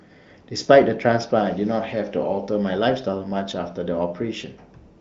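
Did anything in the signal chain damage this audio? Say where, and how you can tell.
No, nothing in this speech stood out on listening as damage from any stage of the signal chain.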